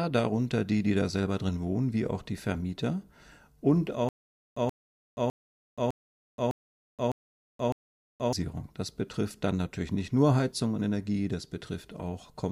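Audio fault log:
4.09–8.33 s, stutter with silent gaps. The same short burst of about 0.13 s repeats 7 times. Each burst is followed by about 0.48 s of dead digital silence. The cycle repeats every 0.61 s. The even pace gives a mechanical, halting sound. The likely cause is a stalled player or stream that replayed its last fragment at each retry, then ran dry. The audio that belonged in this span is missing.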